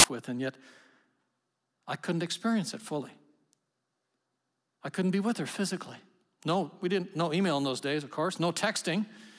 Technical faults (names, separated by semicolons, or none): file tags played as audio